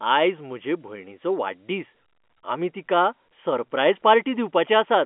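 No technical faults are audible anywhere in the speech.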